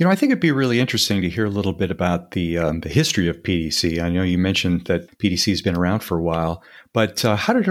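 No technical faults can be heard anywhere in the recording; the speech signal stays continuous and stable throughout.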